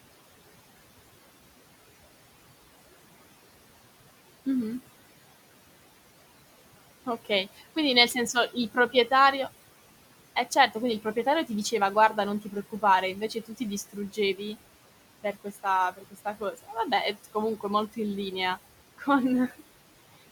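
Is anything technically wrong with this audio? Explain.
Yes. Noise suppressor artifacts run throughout: the suppressor pulls the room noise down about 17 dB between phrases, so the background pumps with the speech, unlike steady room hiss.

Speech cut by the noise suppressor occurs at 7.06–7.61, 8.14–8.94, 10.51–11.72, 12.17–12.83, 13.16–14.4 and 15.24–17.98 s, the last ending just before "in linea". Brief speech fragments mistaken for noise drop about 12 to 15 dB and sound swallowed rather than cleanly cut.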